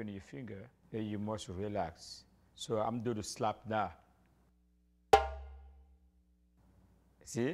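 No technical fault can be heard anywhere in this audio. There is nothing in it that calls for a fix or an explanation.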